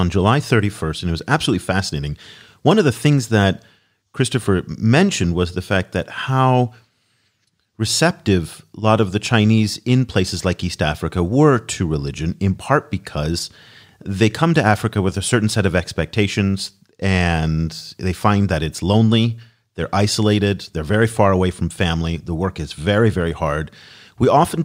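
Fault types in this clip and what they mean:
No technical faults can be heard anywhere in the speech, with the signal level, continuity and tonal balance holding steady throughout.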